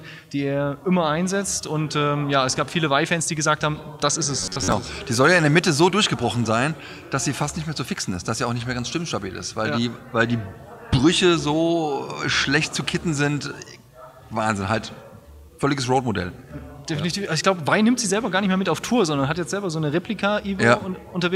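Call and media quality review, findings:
Robotic sound from repeated short buffers, 4.40 to 4.72 s. Sound collapses into a rigid metallic buzz at 93.8 Hz, still tracking the overall contour. Likely cause: playout buffer underrun with concealment looping the last ~10.7 ms block, with about half the span repeated rather than real audio. Waveform shows identical cycles repeating within the region. Spectrogram shows evenly spaced harmonic stripes at multiples of 93.8 Hz replacing normal detail.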